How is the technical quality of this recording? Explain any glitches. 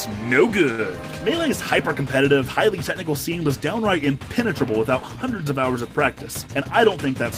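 Two glitches stand out, one near the start and one near the end.

From 0.71 to 0.80 s there's a short stall from a late packet. A packet didn't arrive in time and the jitter buffer ran dry, so the receiver held the last bit of sound for about 71 ms until it arrived, then picked up where it left off. Nothing is lost, but that moment drags a little, with a faint buzzy hold.

From 6.41 to 7.06 s there's a jitter buffer speed-up. The buffer had built up extra delay, so the receiver trimmed small pitch-period chunks in quick succession, about a tenth of a second in total. Playback runs at about 112% speed with the pitch unchanged, so it sounds hurried.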